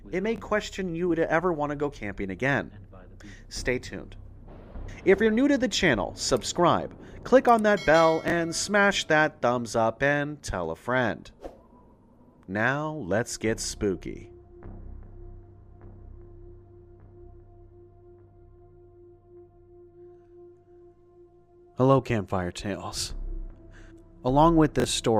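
Chunks out of order occur at 0.36 to 0.40 s, 8.28 to 8.32 s and 24.80 to 24.84 s in this audio. Each time, one 20 ms chunk arrives a single chunk late and plays after the chunk that should follow it, so two adjacent pieces swap places. Nothing is missing, but the reversed pair creates three abrupt joins, heard as a brief jumbled flicker.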